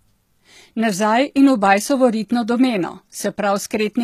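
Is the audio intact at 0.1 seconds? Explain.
No. From the start through 0.1 s, the speech carries plainly audible HE-AAC compression damage, likely at roughly 20 kbps. The treble above the coded band is rebuilt from copied lower bands, so sibilants sound gritty and metallic. A spectrogram shows smeared, repeated high-band patterns and nothing above 14.9 kHz.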